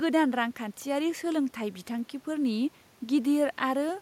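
Speech with room noise sitting about 35 dB below it, and no technical fault is audible.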